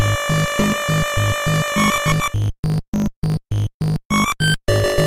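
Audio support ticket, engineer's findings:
Block size mismatch (truncated), whole clip: 50 Hz buzz at the block rate, sound about 1.07x fast with timbre intact. Block tails dropped, consistent with 1024-sample blocks written, shorter ones read.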